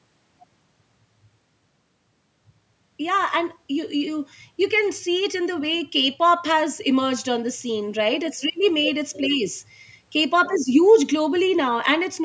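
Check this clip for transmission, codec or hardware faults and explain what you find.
No transmission, codec or hardware faults turn up in this clip.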